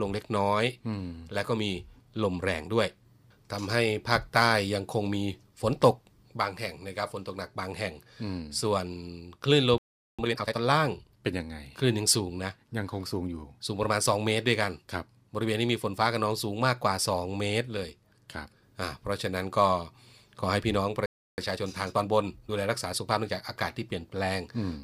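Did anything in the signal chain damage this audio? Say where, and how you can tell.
Yes, at the playback stage. The speech halts mid-flow at 9.78 s for about 0.40 s and again at 21.06 s for about 0.32 s. These are playback stalls, likely from the player starving for data or its thread being blocked. The full gaps of plain silence set them apart from brief codec dropouts.

Each stall is followed by time-compressed catch-up. From 10.19 to 10.59 s the speech runs at 2.0 times speed, and from 21.38 to 23.52 s at 1.15 times, as the player cross-fades out small slices to shed its backlog. Pitch stays normal, which rules out a sample-rate mismatch.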